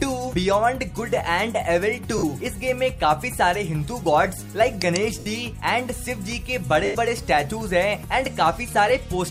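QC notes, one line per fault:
2.18–6.95 s, lost LE Audio frames: three gaps in the Bluetooth LE Audio stream, at 2.18 s (50 ms), 5.19 s (70 ms) and 6.85 s (100 ms), consistent with runs of 10 ms LC3 frames going missing. The decoder covers each gap by repeating the last good spectrum with randomised signs, so tonal content blurs into a noisy smear. It then fades that fill, so the longest gap, at 6.85 s, sags audibly toward silence before the signal returns.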